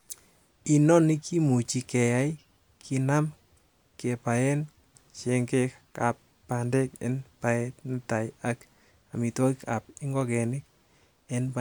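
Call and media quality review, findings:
No audible faults found in the speech; nothing to flag against any component.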